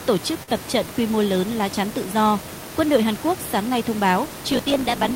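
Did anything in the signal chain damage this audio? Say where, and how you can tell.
Yes. At the network stage there is a short concealed packet loss from 0.43 to 0.49 s, just before "tập trận quy mô". About 40 ms of audio never arrived and the receiver filled it by extending the preceding sound, heard as a brief smear before the real audio resumes.

The buffer stage shows a block size mismatch (truncated) from 4.22 s to the end, starting after "sáng nay thông". A 54.4 Hz buzz appears and the speech runs about 1.16 times fast. Each block's tail is dropped, which fits 1024-sample writes being read in shorter blocks.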